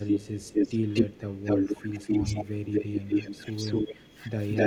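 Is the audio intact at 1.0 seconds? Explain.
No. From 0.93 to 1.21 s an echo leak is audible: a delayed copy of the speech trails the original by 247 ms, at about the same loudness. The likely cause is a far-end loudspeaker whose echo canceller let part of the microphone's pickup return down the line. Unlike room reverberation, which smears into a decaying tail, this is a distinct repeat arriving a quarter-second later, then stopping.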